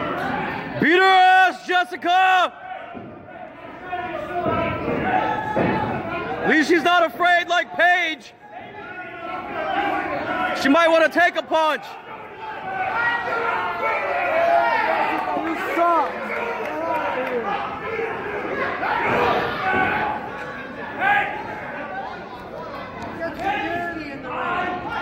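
No technical faults can be heard anywhere in the audio. There is nothing to point to at any moment in the recording.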